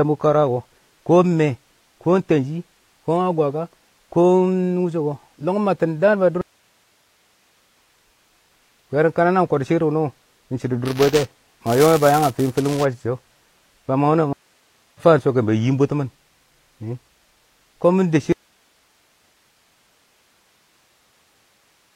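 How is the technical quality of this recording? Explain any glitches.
The recording has four clear glitches of three kinds, and the last one runs to the end.

At 6.41 s, right after "lɔng mabtɪn daan ba", the speech stops dead for about 1.3 s, and when it returns at 7.76 s it has skipped ahead by roughly a second. A shorter break of about 0.6 s follows at 14.33 s, resuming at 15.01 s roughly 0.4 s further on. Both are stream reconnects. The connection dropped, the player fell silent, then rejoined the live stream with a fresh decoder at a later point, so the material in between was simply never heard.

From 10.85 s to 12.85 s the speech takes on a robotic buzz at about 200 Hz that is present only while sound is playing. This is buffer tearing. The software filling the playback ring buffer and the hardware draining it have drifted into each other's path, so each period contains a small sliver of audio from one lap earlier, around 10 ms old. 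The hard joins on either side of that sliver repeat at the buffer rate, and that repetition is the buzz.

At 18.33 s the speech cuts out abruptly and never returns. Only faint hiss remains, about 40 dB below the normal level, through to the end of the clip. This is an audio dropout to a faint residue. The change is instant rather than a pause or fade, which points to the wanted signal being lost while the stages after the break stayed live, likely a feed or connection failure upstream, leaving only their own noise.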